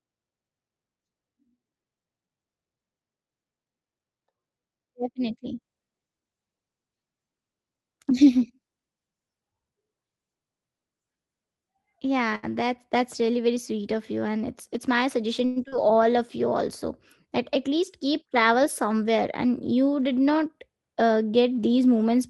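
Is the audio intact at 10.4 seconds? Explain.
Yes, at 10.4 seconds the speech runs on without any audible dropout, click, distortion or other break, so the audio is intact at that moment.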